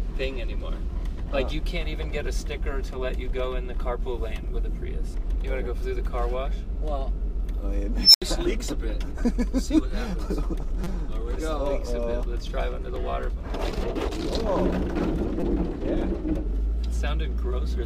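A shrill tone of roughly 5 kHz swells for about 119 ms at 8.02–8.22 s, then drops to about 76 ms of silence: an unstable filter whose output ran away and overflowed. Brief buzzing stutters at 10.84–10.86 s, 12.96 s and 15.40–15.42 s are a repeated buffer, with 5.8 ms chunks replayed, which fits a 256-sample buffer.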